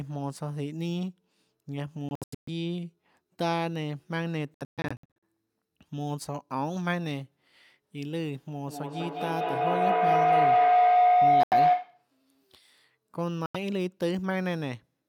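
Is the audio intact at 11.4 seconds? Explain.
No. From 8.67 to 12.09 s a second device in the same room sits on the call, and the path from its loudspeaker back into the microphone adds level on each trip. That is feedback howl: the repeats build instead of dying away and narrow to a tone near 700 Hz, with the loop repeating about every 200 ms. It peaks at about 10 dB above the speech and lasts until the loop breaks.

Just after 11.4 s, from 11.43 to 11.54 s, the output falls silent for about 85 ms. This is most likely a Bluetooth dropout, with audio packets missing their deadline to the headphones and being discarded. The gap cuts through the howl, and the sound resumes as though it had kept playing underneath.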